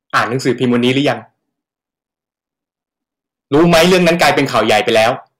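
Harsh, fuzzy distortion rides over this speech clip from 0.14 to 1.12 s and again from 3.54 to 5.11 s. That is hard clipping: the signal is driven about 12 dB, then about 15 dB, past what a stage can pass, so its peaks are sheared flat and spray high harmonics.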